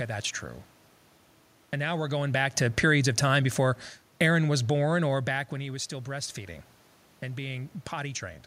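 From 1.81 to 5.25 s, automatic gain falling: the control judges the input too loud or its background noise too strong and eases it down about 5 dB. Speech and room noise sink together, so the waveform envelope and spectrogram floor slope downward.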